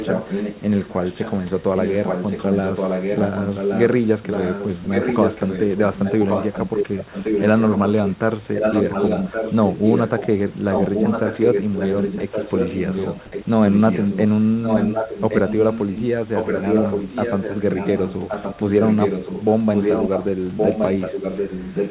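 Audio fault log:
0.0–1.51 s, 1.76–8.16 s, 8.53–10.39 s, 10.7–14.21 s, 14.62–16.02 s, 16.34–19.45 s, 19.73–20.28 s and 20.57 s to the end: echo leak. A second copy of the speech trails the original by about 1.12 s, running for long stretches. It sits only a few dB below the direct speech and is about equally loud between 19.73 and 20.28 s, so the two overlap and compete. The likely cause is a far-end loudspeaker whose echo canceller let its own microphone pickup pass back into the call.
4.84 s: sound dropped by the voice detector. For a single 20 ms instant in the middle of the echo-laden passage, the speech vanishes and is replaced by a short patch of steady, featureless noise before the sound resumes. The sender's voice activity detector likely judged that moment to be background and stopped transmitting, so the receiver filled the hole with comfort noise.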